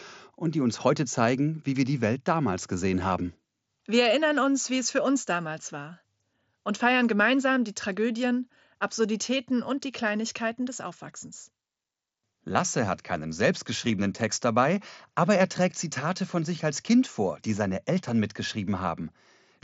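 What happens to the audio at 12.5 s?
At 12.54 s there is a brief flicker: for about 15 ms the sound turns buzzy before the real signal resumes with a slight warble. This is concealed Bluetooth headset packet loss, which fits two short packets going missing on the wireless link. The receiver filled the gap by repeating the closest-matching piece of the preceding waveform, so the dropout is patched over rather than heard as silence. The mSBC headset codec is carrying the audio here.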